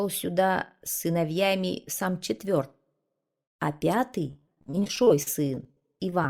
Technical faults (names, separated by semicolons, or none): repeated packet loss (robotic sound)